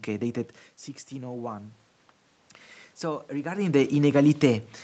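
Automatic gain rising from 3.0 to 4.71 s: after the input dropped about 10 dB, the gain control slowly added about 4 dB, swelling speech and background together.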